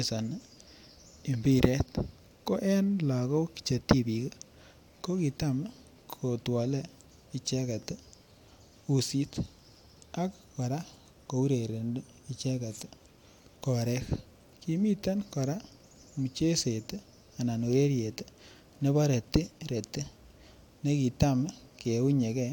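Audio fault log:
No fault can be heard anywhere in the speech recording. Nothing in it calls for an entry in this log.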